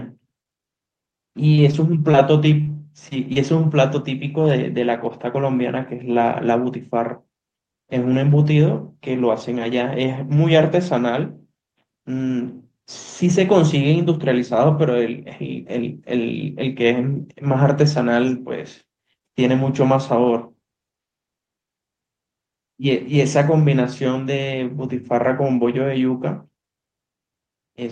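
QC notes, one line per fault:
1.55–3.37 s, repeated packet loss (robotic sound): a run of brief dropouts, the longest about 40 ms, with roughly 140 ms of sound missing in total. Each hole is bridged by stretching the preceding sound, about 8% of the stretch, so the passage turns choppy. On a spectrogram, smeared, flattened harmonic slivers interrupt the speech under a top edge near 12 kHz, which fits a call codec. The waveform shows stuttering, repetitive envelope segments.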